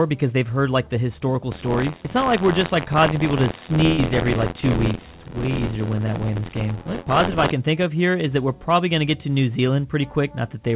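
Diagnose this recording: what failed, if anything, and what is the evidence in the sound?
Buffer tearing, 1.51 to 7.52 s: a driver or buffer fault, heard as a robotic buzz near 86.1 Hz, which fits a 512-sample buffer whose read and write positions cross each period and replay roughly 15 percent of old audio.

Burst of packet loss, 3.86 to 4.01 s: a network fault, where about 120 ms went missing and the receiver stretched the last sound into a fading fill before jumping ahead.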